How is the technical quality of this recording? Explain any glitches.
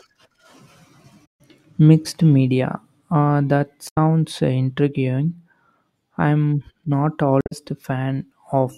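The recording has three short glitches from damaged data in a compressed stream. They run from 1.24 to 1.41 s, from 3.85 to 3.97 s, and from 7.38 to 7.53 s, each lasting well under a fifth of a second. At each one, a stretch of the encoded speech is corrupted, so the decoder misreads those frames and loses sync until it finds the next valid frame header. You hear that as a brief chirp, squawk, click or short hole in the speech.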